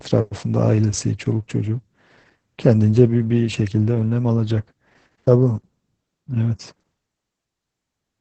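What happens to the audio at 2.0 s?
At 2.0 s the speech carries Opus voice compression, present across the whole clip: the SILK coder, squeezed to a rate around 10 kbps, codes the excitation coarsely, so it sounds muffled, hoarse and faintly robotic. A spectrogram shows an empty band above 8.6 kHz and smeared harmonics.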